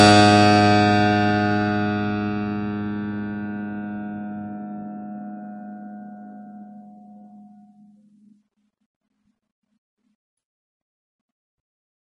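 From start to finish the music has a hard treble ceiling around 10.6 kHz, plus a watery, swirly texture, metallic chirps on the bright parts and smeared attacks, all plainly audible. That's likely MP3 compression starved of bits, which fits a very low rate somewhere near 34 kbps.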